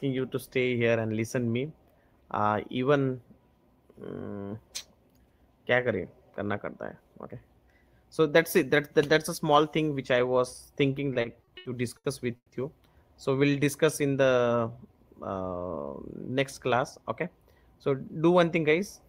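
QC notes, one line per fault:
11.13–12.52 s, repeated stalls (stutter): six brief halts, the longest about 140 ms, where the playout buffer ran dry and the last sound was stretched to bridge each wait. About 370 ms of filler, roughly 27% of the span, makes it drag and stutter without losing content.
13.39–13.65 s, jitter buffer slow-down: the receiver padded its short reserve by repeating single pitch periods, adding 43 ms. Playback drops to 87% speed while pitch stays put, so the sound is briefly drawn out.
15.76–16.67 s, jitter buffer speed-up: with too much audio queued, the receiver trimmed short pitch-period slices, around 70 ms in total, to shrink the delay. The passage runs at 107% speed at unchanged pitch, giving a slightly hurried, rushed feel.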